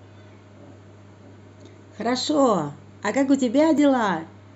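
At 3.78 s a sharp tick cuts into the speech, a block of digital silence lasting about 1.5 ms. A short run of samples, consistent with a 64-sample block, dropped straight to silence and back with no fade, most likely because the output buffer wasn't filled in time.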